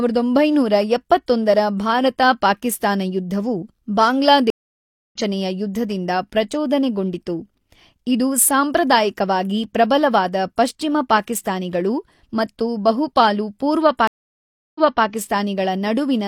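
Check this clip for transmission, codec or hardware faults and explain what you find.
Two stream reconnects break this speech clip. At 4.50–5.17 s the audio drops out for 0.61 s, then resumes roughly half a second further on at "ಯುದ್ಧದಿಂದ ಪ್ರಚೋದನೆಗೊಂಡಿತು". At 14.07–15.05 s a 0.68 s silence ends with the audio jumping back 0.30 s, repeating material. Each time the connection failed, the player reconnected, and a fresh decoder picked up mid-stream at a different point.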